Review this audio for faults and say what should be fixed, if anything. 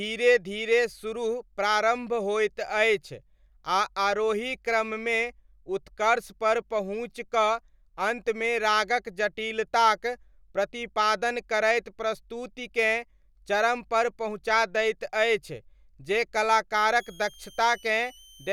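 A switching supply whistle comes in at 16.93 s and runs to the end at 18.52 s: a thin, high tone around 3 kHz, roughly 25 dB below the speech, wandering between 2.95 and 3.38 kHz. A switch-mode supply has dropped into an audible burst or beat frequency, and its pitch shifts as the load changes. On a spectrogram it appears as a faint, slightly wavering horizontal line near 3 kHz. On the waveform it is a fine ripple riding on the signal. Keeping switching supplies away from the audio path, or using linear or well-filtered supplies with switching frequencies held above the audible range, would prevent it.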